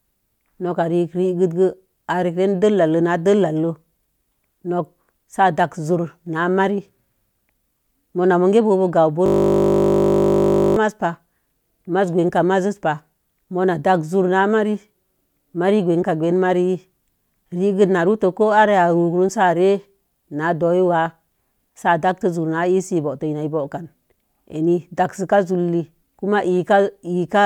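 At 9.26 s the speech gives way to a system hang loop lasting until 10.77 s: the playback side stalled while the audio hardware kept replaying the same 20 ms stretch of its buffer, roughly 75 times over. Because the loop is so short, it comes across as a steady 50 Hz buzz rather than a stutter. Unlike packet-loss glitches or concealment, every repeat is identical and perfectly periodic, with no variation or fade, until the sound resumes abruptly.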